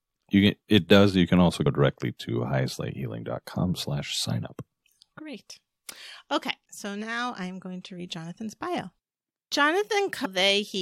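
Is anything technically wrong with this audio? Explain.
Yes. The speech has damaged data in its compressed stream. At 1.65 s, between "can also" and "directly to", and again from 10.24 to 10.26 s, corrupted bytes make the decoder misread frames and resync, giving a brief glitch such as a chirp, click or short hole. Each appears as a sharp broadband vertical streak on a spectrogram and a discontinuity in the waveform.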